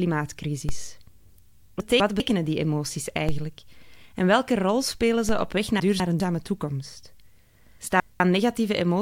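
At 0.69 s there is a DC step. The zero line of the waveform suddenly shifts and then settles back over a fraction of a second, as a 2 Hz high-pass pulls the offset down. The sound rides on unchanged, but the jump produces a dull low thump. On a waveform the whole trace lifts off centre and sags back. On a spectrogram it shows as a brief smear at the very bottom, near 0 Hz.

From 1.8 to 2.2 s, just before "die emoties", the chunks are out of order. A 200 ms chunk arrived one slot late and plays after the chunk that should follow it. Nothing goes missing, but the speech jumps forward and then back, and there are three hard joins. On the spectrogram, vertical seams mark each join, with broken formant tracks between them.

Further DC steps follow at 3.29 s, and at 5.29 s between "welke rol spelen" and "op weg". Each gives the same thump and decaying offset. The same chunk swap recurs from 5.8 to 6.2 s, just after "op weg", and again from 7.8 to 8.2 s, each a jumbled 0.4 s.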